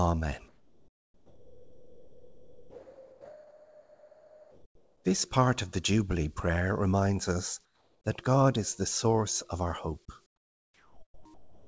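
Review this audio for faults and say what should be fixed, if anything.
A jitter buffer speed-up runs from 0.05 to 0.39 s. The receiver's buffer had built up more audio than its target, so it cut out short pitch-period-sized slices again and again. Around 50 ms was removed, and that stretch plays at 111% speed with unchanged pitch, so it sounds rushed. On a waveform, the periodic cycles in that stretch look slightly compressed, and a spectrogram shows harmonics at the same height but events packed closer together. To prevent it, smooth out network delay bursts so that packets don't pile up and force the buffer to drain.

Sound dropped by the voice detector covers 0.48 to 5.04 s. For 4.56 s the real signal is replaced by flat, steady noise, and about 2.76 s of actual sound disappears inside that span. The sender's detector likely took quiet material for background and stopped transmitting, so the receiver synthesised comfort noise. 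A spectrogram shows a smooth, featureless band with no onsets or harmonic structure, and the waveform becomes a uniform low-level fill. To prevent it, lower the detector's threshold or lengthen its hangover time so that quiet sound isn't gated off.

Comfort noise in place of the background appears at 7.65–8.04 s, 10.26–11.25 s and 11.34–11.63 s. In each gap, a smooth synthetic hiss stands in for the real background. That background sits about 40, 34 and 31 dB below the loud parts, and the level drops by about 7, 9 and 8 dB at each swap. The likely cause is discontinuous transmission, with the receiver shaping noise from occasional updates. A spectrogram shows those patches as uniform and texture-free, with a visible step in level at each edge. This happens over a G.722 call path, where nothing reaches above 8 kHz. To prevent it, disable discontinuous transmission or send comfort-noise updates more often so the fill matches the real background.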